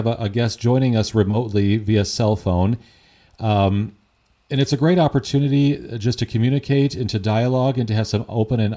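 Speech recording with no audible technical faults anywhere.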